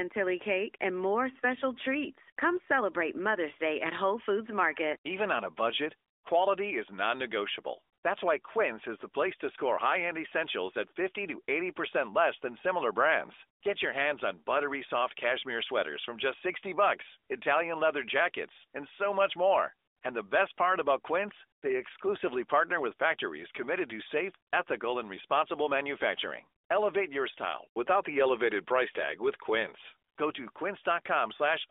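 No technical faults turn up anywhere in this speech clip. The AMR narrowband mobile codec path at 12.2 kbps is working as designed, confining the sound to a telephone band of roughly 300 Hz to 3.6 kHz with only light coding damage.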